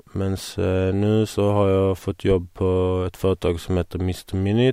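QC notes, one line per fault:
2.31–2.37 s, phantom power thump: a deep low-frequency thump peaking at about -15 dBFS and dying away within 12 ms. A supply was switched on or off on a live input, and the sudden voltage step passed through the coupling capacitors into the speech signal.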